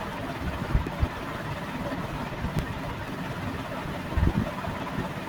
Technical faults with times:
0.13-5.05 periodic USB or driver dropouts

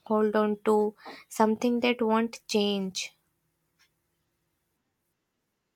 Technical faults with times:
none

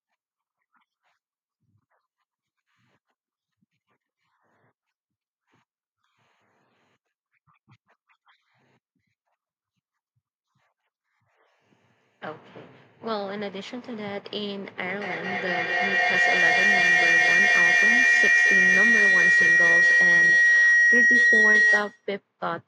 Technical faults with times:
14.78-22.12 feedback howl

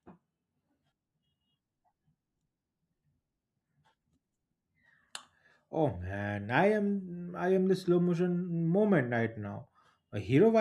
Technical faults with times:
none

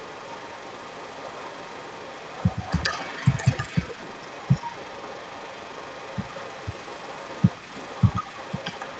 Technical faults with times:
0.00-9.00 echo leak

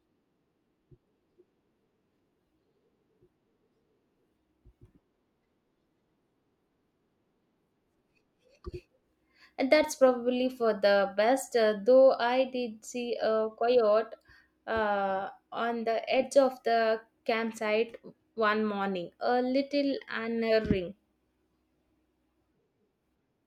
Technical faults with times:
none

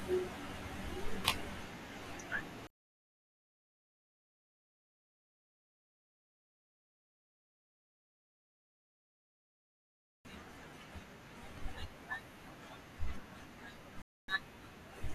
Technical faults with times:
14.02-14.29 digital broadcast dropout

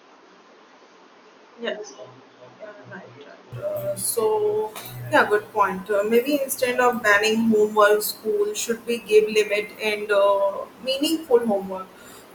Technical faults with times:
0.00-3.52 input switched to a poorer device

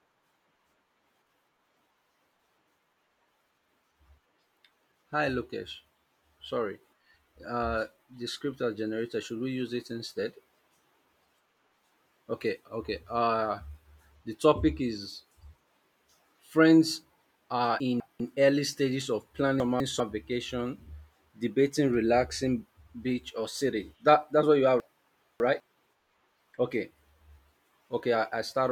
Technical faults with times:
17.80-18.20 chunks out of order
19.60-20.00 chunks out of order
24.80-25.60 chunks out of order

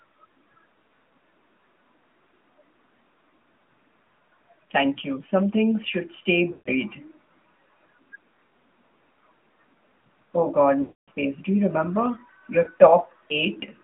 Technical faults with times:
0.00-13.83 AMR narrowband mobile codec
6.52-6.69 lost AMR speech frames
10.82-11.09 lost AMR speech frames
12.64-12.70 lost AMR speech frames

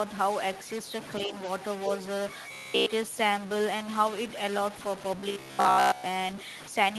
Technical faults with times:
0.00-6.98 stuck bit
1.25-1.34 other side's voice leaking through
2.52-2.86 robotic sound from repeated short buffers
5.20-6.04 robotic sound from repeated short buffers

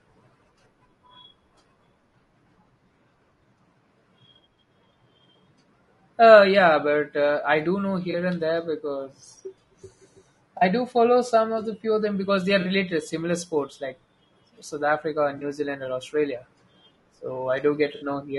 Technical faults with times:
0.00-18.39 low-delay AAC compression
8.11-8.15 AAC frame loss with concealment
10.57-10.63 AAC frame loss with concealment
12.61-12.67 AAC frame loss with concealment
15.37-15.43 AAC frame loss with concealment
17.95-18.05 AAC frame loss with concealment

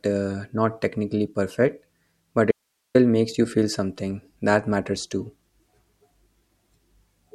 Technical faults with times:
2.51-2.95 audio dropout to a faint residue

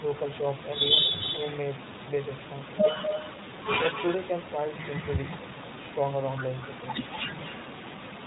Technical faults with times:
0.00-8.27 iLBC codec
1.16-1.81 echo leak
3.02-3.38 echo leak
3.92-4.27 echo leak
5.16-5.63 echo leak
7.11-7.82 echo leak

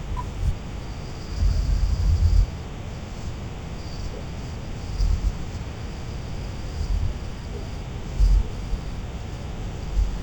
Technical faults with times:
0.00-10.22 stereo read as mono

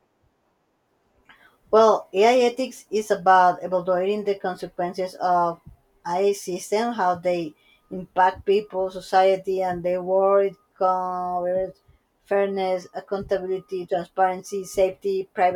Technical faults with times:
none

